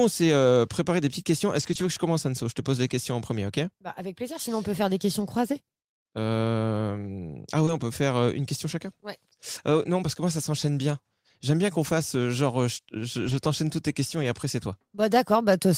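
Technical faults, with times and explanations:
1.59–1.85 s, 7.67–7.69 s, 13.27–13.37 s and 14.23–14.25 s: lost packet rebuilt from error correction. The speech continues without a gap but sounds rougher and noisier, because low-bitrate backup copies stood in. On a spectrogram these spans show grainier, smeared harmonics.
7.65–7.69 s: short concealed packet loss. About 20 ms never arrived, so the decoder extended the preceding sound and blended back, leaving a brief smear.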